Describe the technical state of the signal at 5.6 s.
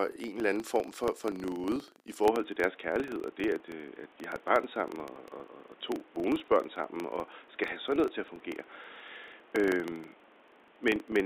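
At 5.6 s a steady 25 Hz buzz runs under the speech, rising and falling with its level. This is a filter restarted on every block, each 40 ms block starting from silence; unlike mains hum, it vanishes in pauses. The speech there also sits inside a span from 2.25 s to the end, where the input likely switched to a poorer device. The band is narrower, and a new background noise about 30 dB down arrives with it, unlike a plain low-pass filter. There is no gap and no level jump at the switch.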